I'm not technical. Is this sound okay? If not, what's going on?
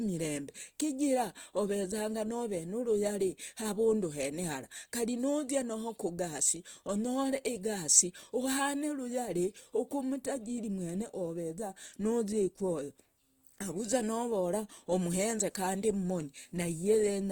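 No. Opus compression affects the speech from start to finish: the voice sounds rough, grainy and hissy rather than clean. This is likely from a low-quality Opus encoding. To save space, the encoder keeps only the rough loudness of each pitch range and fills in the fine detail with borrowed or noise-like sound, so smooth vocal tones come out coarse and sandy even though the high treble is still present.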